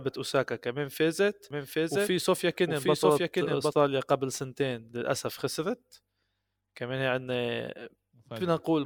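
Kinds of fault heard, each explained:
Doubled audio track: from about 1.5 s to 3.7 s a second, full-band copy of the speech runs roughly 0.7 s behind the original at around 5 dB lower, most likely because a slower capture path or an edit left two copies out of step. It has no decay or room colour and starts and stops abruptly. On a spectrogram the whole speech pattern repeats, shifted right and slightly fainter; the waveform shows overlapping, time-displaced envelopes.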